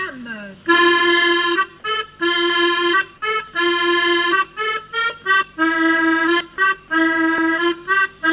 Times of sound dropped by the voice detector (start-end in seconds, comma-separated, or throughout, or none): 6.56-6.58